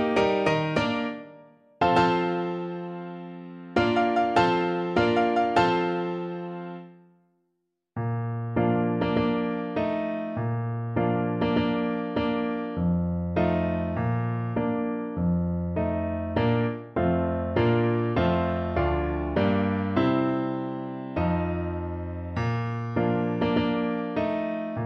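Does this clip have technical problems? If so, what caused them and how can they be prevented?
No, the signal stays technically intact throughout, with no audible problems that would need a cause or a fix.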